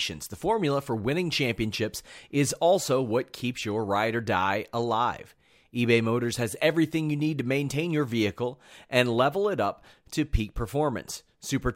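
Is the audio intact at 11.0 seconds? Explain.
Yes, at 11.0 seconds the audio is intact, with no dropout, click, distortion or other fault to be heard at that moment.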